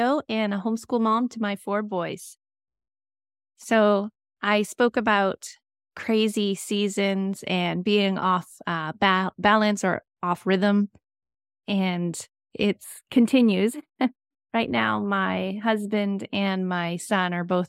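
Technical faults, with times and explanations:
12.84–16.35 s: channel delay (comb filtering). One channel lags by a few samples, so the mono sum cancels at evenly spaced notches starting around 7 kHz, making the speech sound hollow or phasey.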